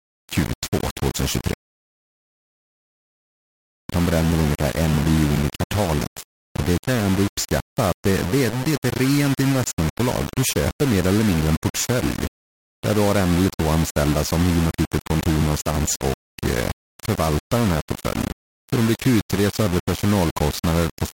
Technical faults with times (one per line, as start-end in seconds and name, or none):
0.00-21.14 low bit depth without dither